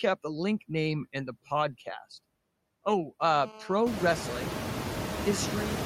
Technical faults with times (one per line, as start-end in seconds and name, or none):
0.00-5.86 noise suppressor artifacts
3.20-5.21 GSM phone buzz